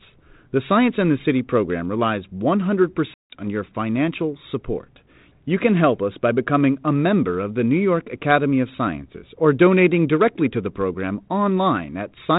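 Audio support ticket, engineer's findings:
Packet loss on an ADPCM call, 3.14 to 3.40 s. Hard-edged silent hole, about 160 ms lost, fits roughly seven dropped packets. Recovery at "your financial support": brief slight distortion. Decoder predictor and step size out of step with sender, resettling within tens of ms. Carrier G.726 ADPCM audible: no content above 4 kHz, light codec damage consistent with 32 kbit/s.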